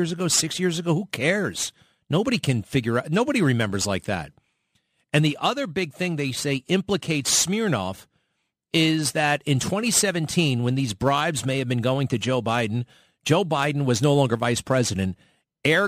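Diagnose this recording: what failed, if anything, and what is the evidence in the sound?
Crude rate conversion at the sample-rate conversion stage: throughout, an inharmonic fizz about 20 dB below the speech tracks loud, bright passages, which fits 48 kHz to 44.1 kHz conversion by dropping samples without filtering.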